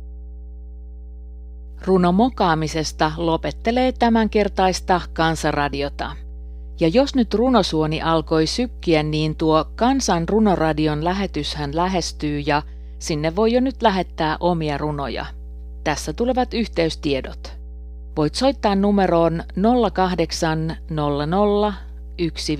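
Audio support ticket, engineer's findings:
Mains hum at 60 Hz throughout speech, about 15 dB below signal, low harmonics present. Spectrogram: unbroken horizontal line at 60 Hz plus stacked lines above, waveform shows steady low ripple under gaps. Probable ground loop or nearby transformer coupling power line into signal path.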